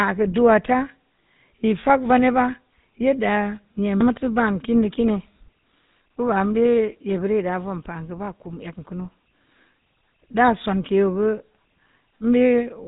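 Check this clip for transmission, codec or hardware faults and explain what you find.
One fault runs through the whole speech clip: GSM full-rate codec damage. It is present from start to finish. The codec models the vocal tract as a filter. It drives that filter with a sparse train of regular pulses, so most of the excitation detail is discarded. The result is a plainly audible buzzy, gravelly roughness on the speech. Nothing passes above about 3.8 kHz, so sibilants sound dull. The degree of damage fits a 13 kbps GSM link.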